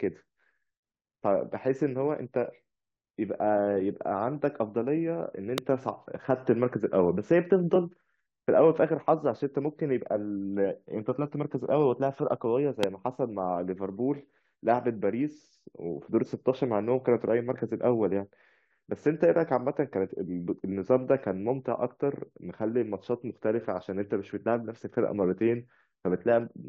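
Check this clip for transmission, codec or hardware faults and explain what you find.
Two loud pops interrupt the speech, at 5.58 to 5.60 s and again at 12.83 to 12.86 s. Each is a single sharp pop lasting about 20 ms and peaking roughly 20 dB above the speech, which carries on underneath without a break. The likely cause is a sudden voltage step or spike entering the signal chain, for instance from a plug, switch, static discharge or driver glitch, which the following circuitry shapes into a brief, hard transient.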